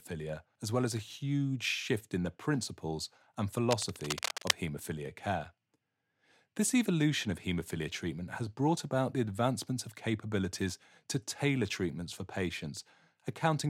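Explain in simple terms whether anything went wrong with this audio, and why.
Right after "in the principles and", from 3.71 to 4.55 s, there's a burst of cable scratch noise, rough rustling, likely from a worn lead or connector being moved.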